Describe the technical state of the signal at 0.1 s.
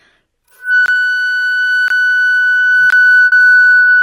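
At 0.1 s the audio is intact, with no technical fault present at that moment.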